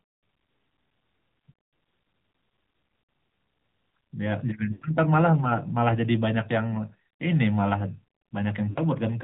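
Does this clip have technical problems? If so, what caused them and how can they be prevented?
Yes. The speech sounds band-limited and buzzy and synthetic throughout, with nothing above 4 kHz. This is AMR narrowband mobile codec damage, plainly audible and consistent with the 10.2 kbps mode. Passing the call over a wideband or higher-quality codec path would prevent it.

Brief drawn-out, fading dropouts occur at 3.02 to 3.08 s, 4.72 to 4.86 s and 8.70 to 8.79 s. These are lost AMR speech frames: the decoder repeated its last good settings at falling gain for about 60 ms, 100 ms and 60 ms. Improving radio coverage or signal strength would prevent these frame losses.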